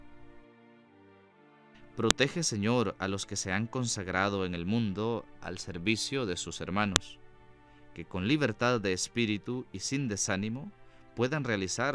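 Two sharp snaps land at 2.1 s and 6.96 s, a textbook file header played as audio: joined WAV segments kept their headers, and those bytes play as one brief click each time.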